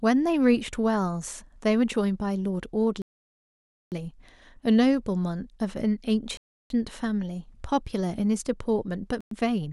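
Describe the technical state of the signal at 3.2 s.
At 3.2 s the signal is in a dead gap: the speech cuts to silence at 3.02 s and resumes at 3.92 s, a 0.9 s dropout. This is likely a Bluetooth stall, where interference delayed packets until the headphones' buffer emptied and playback halted until retransmissions arrived. On the waveform the trace collapses to a flat line across that span; the spectrogram shows a clean vertical band of empty black cutting through every frequency.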